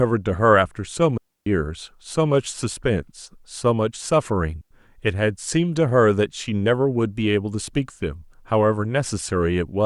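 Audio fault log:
1.18–1.47 s and 4.61–4.71 s: digital wireless dropout. The receiver lost too much data and muted briefly, leaving clean near-silent gaps of 290 ms and 99 ms with no noise bursts.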